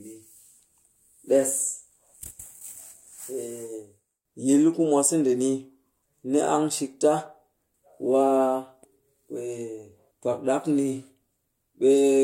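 No technical faults can be heard anywhere in the speech recording, which stays steady and intact throughout.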